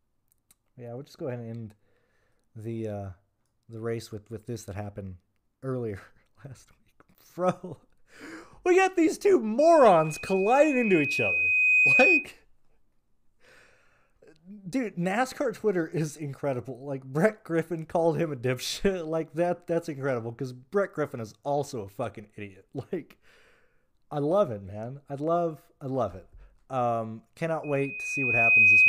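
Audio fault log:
9.59–12.30 s and 27.63–28.88 s, loudspeaker feedback squeal: the loop re-amplifies a 2.5 kHz tone, which swells over a second or two to roughly 10 dB above the sound; a spectrogram shows one brightening horizontal line.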